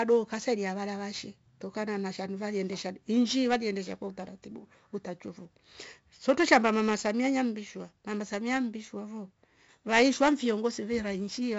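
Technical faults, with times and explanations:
Throughout, 4-bit ADPCM compression: Each sample is coded as a coarse step from a prediction. This leaves gritty hiss riding on every loud syllable and rough distortion on sharp onsets. Nothing reaches above 7.7 kHz, which fits 64 kbps at a 16 kHz rate.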